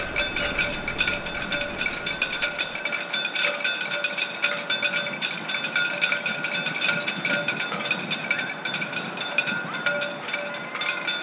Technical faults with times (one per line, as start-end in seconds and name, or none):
none